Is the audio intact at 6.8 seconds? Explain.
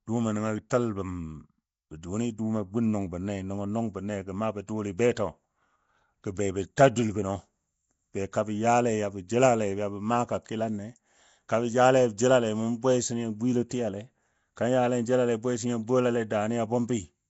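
No. At 6.77 s there is pre-echo: a brief wash of hiss, about 13 ms long, arrives just ahead of the attack of "ta dul" and blurs its onset. The codec divides the audio into blocks and spreads coding noise evenly across each one, so noise meant to be hidden under the loud attack also spills into the quiet instant before it. Unlike a click, which is a single sharp tick, this is soft noise that leans into the attack and smears it.

That moment also carries the rough, hissy halo and watery smear heard across the whole clip, likely from Nellymoser compression at a rate that fits about 32 kbps. Bands too weak to earn bits are filled with noise, and nothing is heard above 7.7 kHz. Unlike a steady background hiss, this grain shifts with the sound and shows up as a dull, underwater colouring rather than a constant layer of noise.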